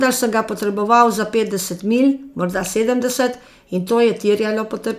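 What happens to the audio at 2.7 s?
Nothing goes wrong at 2.7 s; the speech carries on intact through that moment with no audible fault.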